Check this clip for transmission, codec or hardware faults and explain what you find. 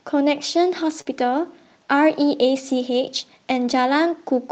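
There is one transmission fault in this speech, heard through an Opus call path whose sound fits a 24 kbps setting with audio ending near 8 kHz.

Short concealed packet loss, 1.01 to 1.07 s: about 40 ms never arrived. The receiver continued the preceding sound, so it comes across as a brief smear.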